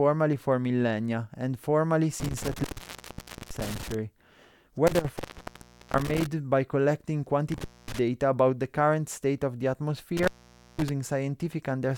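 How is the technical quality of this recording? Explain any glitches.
The speech is repeatedly broken by an intermittent contact, with four dropouts: 2.2 to 3.94 s, 4.87 to 6.27 s, 7.52 to 7.99 s, and 10.17 to 10.89 s. A loose plug or cable is briefly losing connection, so the signal opens for roughly 0.86 s, 0.75 s, 0.24 s and 0.51 s in turn. Each time the speech cuts out with a crackle at the edges and faint hiss underneath until contact comes back.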